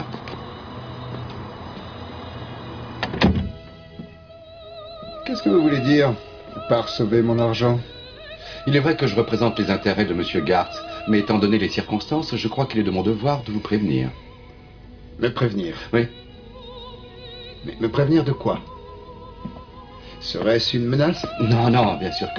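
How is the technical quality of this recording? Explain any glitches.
Nothing stood out as a technical problem on listening to this recording, and there are no glitches to explain.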